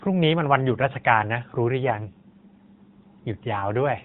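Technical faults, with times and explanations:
1.83 to 2.96 s, AMR rate drop. The speech turns rougher and buzzier, then recovers. The narrowband AMR limit of 4 kHz stays put and nothing cuts out. Fewer bits describe the voice, which fits a fall from 12.2 to 5.9 kbps.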